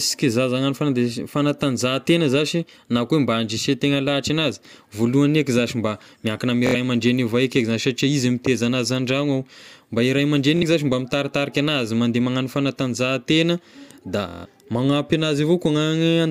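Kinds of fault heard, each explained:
Bluetooth stutter: the wireless link lost or delayed packets, so the receiver kept looping its last short slice, giving quick buzzy repeats at 6.67, 10.57 and 14.28 s. The longest, after "mandeha magnano fanatanjahantegna da", lasts about 0.18 s, then speech jumps ahead.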